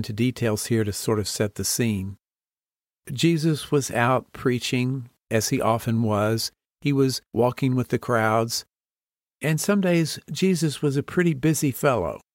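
No technical faults can be heard anywhere in the recording.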